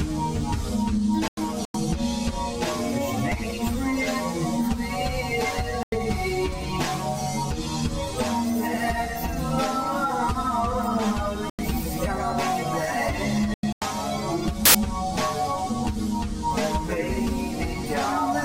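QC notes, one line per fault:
1.28–1.80 s, 5.69–6.09 s, 11.50–11.59 s, 13.54–13.84 s: corrupt frame muted. Each gap drops abruptly to silence. The decoder rejected damaged compressed frames, and the player filled them with nothing. The gaps run from about 0.1 s to 0.5 s, which suggests runs of several lost frames. Timing stays intact.
14.65–14.75 s: corrupt FLAC frame. The error peaks at about −7 dBFS. Flipped bits went unchecked, so the decoder's prediction ran on wrong values from the damaged bit on. The next intact frame comes back clean.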